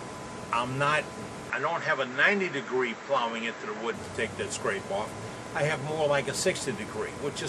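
From 1.50 to 3.94 s everything above 7.8 kHz vanishes and new background noise appears, likely the input switched to a poorer device.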